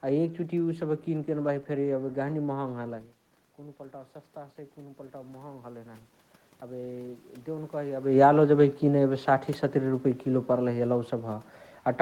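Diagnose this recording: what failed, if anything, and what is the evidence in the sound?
Between 3.58 and 6.08 s the voice and the room noise behind it swell up together over about two and a half seconds. That shared rise marks automatic gain rising in the call-processing stage. Around 3 s the level reaching the microphone fell by about 15 dB as the talker moved away. The gain control read that as too quiet an input and ramped its gain up by about 5 dB, lifting the background noise along with the speech.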